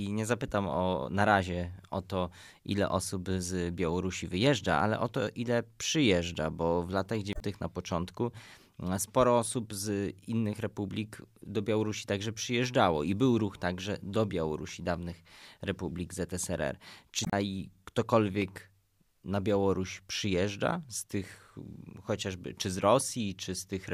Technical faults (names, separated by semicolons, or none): damaged data in a compressed stream